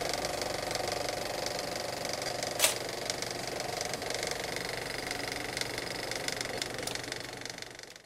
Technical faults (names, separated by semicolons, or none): lost LE Audio frames